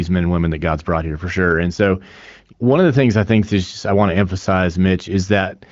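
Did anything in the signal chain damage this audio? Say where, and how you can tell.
No, nothing in the signal chain damaged this audio.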